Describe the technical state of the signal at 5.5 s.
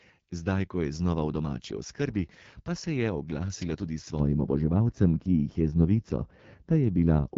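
At 5.5 s the speech passes through the AMR wideband (HD Voice) codec at 8.85 kbit/s, which is applied throughout. At this low rate the pulse-driven vocal tract model leaves the speech plainly rough and raspy, with nothing above 7.6 kHz.

The same moment falls inside a stretch of de-emphasis applied wrongly, running from 4.19 s, just after "se je oglasila tudi", to the end of the clip. A treble cut meant to undo pre-emphasis was applied where none existed, or was applied twice, so the response slopes down to about 11 dB at 10 kHz relative to 1 kHz, and the sound is dull and muffled.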